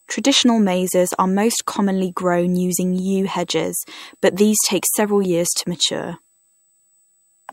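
From start to finish, a steady high whine sits under the speech, pitched at 8 kHz with its strongest component at 16 kHz, roughly 35 dB below the speech. This is USB whine: current drawn in 125-microsecond microframes leaks into the audio through shared power or ground. Unlike mains hum, which sits at 50 or 60 Hz and its low harmonics, this tone is high and fixed at multiples of 8 kHz.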